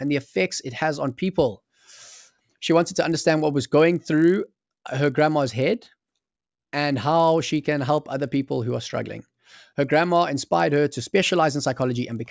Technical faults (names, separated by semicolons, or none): resampler restarted on every block